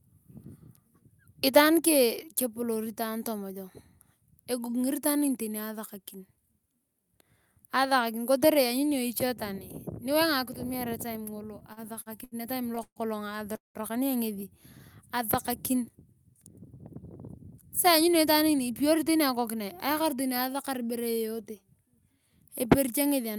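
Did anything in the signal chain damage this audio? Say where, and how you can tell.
Yes. Between 11.59 and 12.99 s there are repeated stalls (stutter) in the network jitter buffer: eight short stalls, the longest 133 ms, filled with continued sound. On a spectrogram, harmonics smear horizontally in short blocks, so the speech drags without losing anything.

From 13.56 to 13.78 s there is a call audio freeze. The last sound is held and fades, leaving about 150 ms of near-silence, a flat trough in the waveform. Speech then resumes where it stopped, 188 ms late. The likely cause is packets held up on the network.

From 17.87 to 19.36 s there is a jitter buffer speed-up. The receiver trims pitch periods repeatedly, removing roughly 150 ms, so speech runs at 109% with unchanged pitch. A spectrogram shows harmonic spacing intact but syllables compressed closer together.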